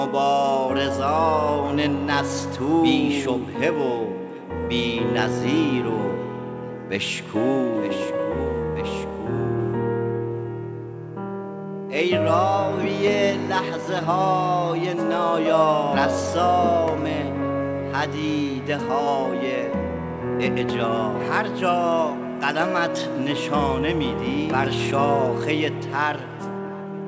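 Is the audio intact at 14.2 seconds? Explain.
Yes, the audio at 14.2 s is intact, with nothing there beyond the call path's normal band limit at about 8 kHz, which fits a G.722 wideband codec.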